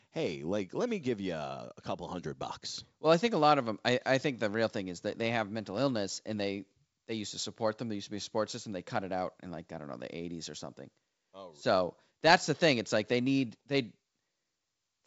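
No faults to report: the speech runs over G.722 wideband telephone coding at 64 kbit/s, with nothing above 7.7 kHz and coding damage faint at most.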